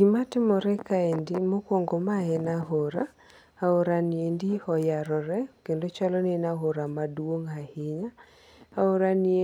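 No technical faults can be heard anywhere in this recording.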